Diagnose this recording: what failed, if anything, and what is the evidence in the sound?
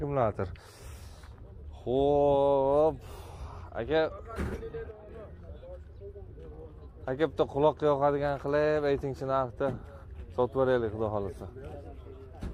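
One channel drops out from 4.91 to 5.09 s; the level falls abruptly by about 6 dB, likely a loose analogue connection dropping one stereo side.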